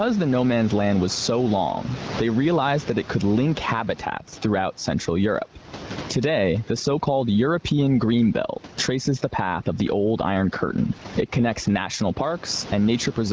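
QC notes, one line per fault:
Throughout, gain pumping: loud and soft parts end up closer in level and the sound is squashed, swinging around 15 dB, likely a fast limiter fighting gain set far too high.
4.06 to 12.23 s, overdone noise removal: just after "that it could link" the background drops and breaks up into twinkly specks as quiet bands get gated out.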